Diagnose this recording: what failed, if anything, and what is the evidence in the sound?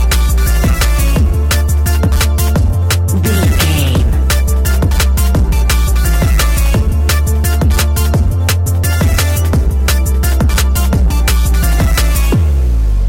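Hard clipping runs throughout: the level is driven about 7 dB past full scale at a converter or gain stage, flattening roughly one sample in seven into harsh fuzz.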